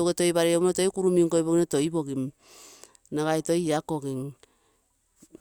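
Speech recording, no technical faults detected.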